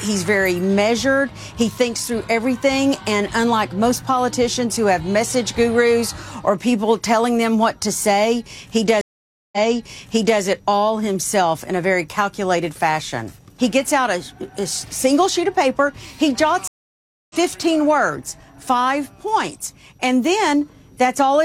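At 9.01 to 10.41 s a stream reconnect drops the audio for 511 ms, a flat gap on the waveform; the restarted decoder resumes 882 ms earlier, repeating material. A second reconnect at 16.68 to 17.36 s leaves a 623 ms blank column, then skips about half a second ahead.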